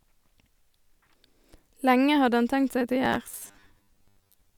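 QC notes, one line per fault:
3.05–4.58 s, robotic sound from repeated short buffers. The speech becomes a rigid 100 Hz buzz, likely from 10 ms chunks repeated in place of about half the audio.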